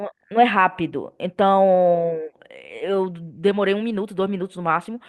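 Speech here, and there's clock drift between sender and receiver running through the whole thing. The sender's clock is running fast, by around five percent, so audio keeps arriving quicker than the receiver plays it out and its jitter buffer keeps filling. To cope, it makes repeated timing corrections from 0.03 s to 4.9 s, trimming short slices at uneven intervals, all in the same direction. The result plays at about 105% pace.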